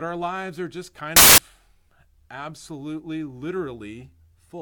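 A speech clip with one clear fault: from about 1.16 to 1.38 s the samples are built from the wrong bytes, so the fast-changing low bits land in the high positions and the sound turns into a blast of loud, harsh broadband noise for roughly a fifth of a second.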